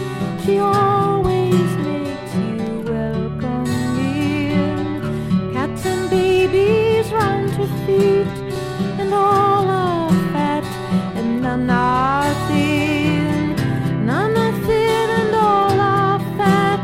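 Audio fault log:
0.39 s and 8.55 s: underrun with held sample. The output buffer ran dry, so the converter held its last value for about 3 ms, then about 2 ms, the first gap lasting 128 samples. The sound flattens briefly, and about 3 ms and 2 ms of audio were skipped meanwhile.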